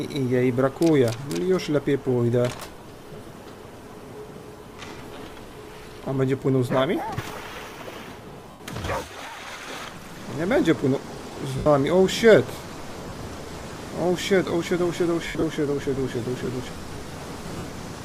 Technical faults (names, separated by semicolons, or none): lost LE Audio frames